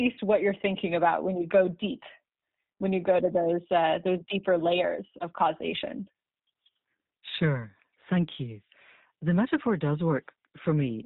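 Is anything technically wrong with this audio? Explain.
Yes. Throughout, the speech has passed through the G.729 codec, which fits an 8 kbit/s VoIP link. The codec rebuilds each 10 ms frame from a vocal tract filter, a pitch predictor and sparse pulses, discarding everything above 4 kHz, so the speech sounds muffled, plainly rough and synthetic.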